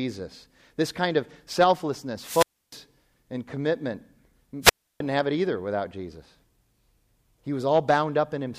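At 2.20 to 2.80 s, after "kind of selflessness", the speech hits a wireless microphone squelch dropout: the FM radio link fades, hiss swells, and the receiver's squelch mutes for about 0.30 s before "and commitment" returns. A second dropout at 4.62 to 5.00 s mutes for about 0.31 s before "have it either without". The hiss rising ahead of each hole sets them apart from digital packet loss, which cuts out abruptly.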